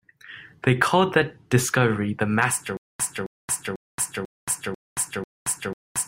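Speech clip with a stutter with silent gaps from 2.77 s to the end: a 268 ms fragment repeats six times, each followed by about 225 ms of digital silence, cycling every 494 ms. Likely a stalled player or stream replaying its last buffer, with the intervening audio lost.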